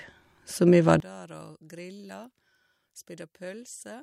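From 1.0 s to the end, the likely problem is one channel inverted: one side of the stereo pair has its polarity flipped, so when the two channels are summed to mono, everything they share cancels. The centred speech drops by about 23 dB, leaving only the faint difference between the channels. What remains is a faint, weak trace of the voice rather than the voice itself.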